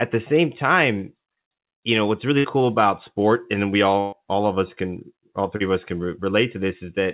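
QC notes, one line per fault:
2.38–2.46 s and 4.00–4.14 s: burst of packet loss after "you know what's" and "about sport and we". The last sound is held as a decaying buzz or hiss for about 60 and 120 ms, then jumps ahead with that audio gone, unlike a brief smear.
5.56–5.62 s: short concealed packet loss after "of us can all". About 40 ms is rebuilt from the preceding sound and blended back, giving a quick smear or wobble rather than a held, fading tail.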